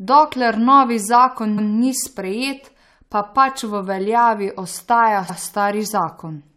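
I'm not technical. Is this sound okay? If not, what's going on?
No. This speech has two stutters caused by repeated frames. At 1.57 s, a 0.14 s stretch plays twice in a row, and at 5.28 s, a 0.09 s stretch does the same. A small chunk of the stored audio got written or sent a second time, so the player simply plays it again. Unlike a dropout, nothing goes missing. Instead, a bit is heard twice, and the clip runs slightly longer.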